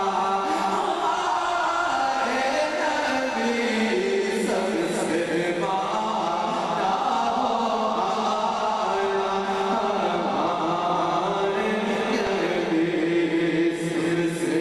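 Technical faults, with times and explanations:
12.27 s, damaged data in a compressed stream: a brief glitch, lasting only a few milliseconds, cuts across the sound. A short stretch of the encoded data at this point is corrupt, so the decoder cannot read the affected frame properly. It loses sync before regaining it at the next valid frame header, which is why the fault is heard as a sudden, unnatural glitch.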